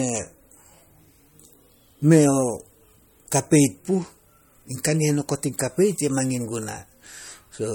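From start to finish the speech carries a hard ceiling, with nothing above 17.3 kHz, along with the smeared, swirly detail typical of a starved MP3 encode. This is likely low-bitrate audio saved at a high bitrate: a file squeezed at something near 48 kbit/s, then re-encoded around 192 kbit/s. What sets it apart from ordinary low-bitrate coding is that the larger second encode restores nothing and adds almost no new damage. The early losses simply survive intact.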